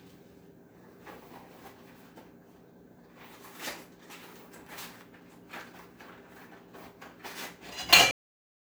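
The final stretch of buffers was never written out, so this recording of sounds has a cut-off end: at 8.11 s the audio stops dead in the middle of whatever is sounding, with no fade or natural decay, and drops straight to digital silence for the remaining moment or so. Because the missing data was simply never delivered to playback, the sound ends abruptly rather than trailing away.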